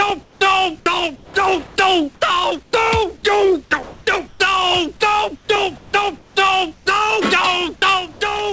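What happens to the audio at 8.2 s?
Comfort noise in place of the background occupies 8.12 to 8.21 s, a 90 ms stretch where the quiet background, about 25 dB below the loud parts, turns into a steady, featureless hiss at the same level. The likely cause is discontinuous transmission: the sender's activity detector judged the signal silent and stopped sending, so the receiver filled the gap with synthetic noise shaped to the background, erasing its detail until the sound resumes.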